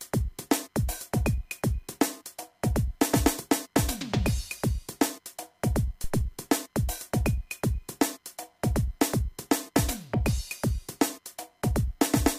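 A phantom power thump lands at 6.04 s and has gone by 6.35 s: a deep, low thump peaking at about -19 dBFS, with the bulk of it dying away within roughly 69 ms. A supply switching on a live input sends a voltage step through the coupling capacitors, and that step produces this shape. It differs from a plosive or handling bump by having no airy burst or rustle, only a clean, smooth low-frequency decay.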